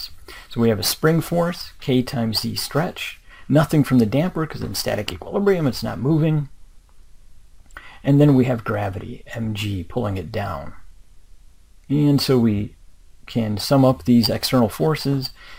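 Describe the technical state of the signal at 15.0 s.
At 15.0 s the signal is intact, with no technical fault audible at that moment.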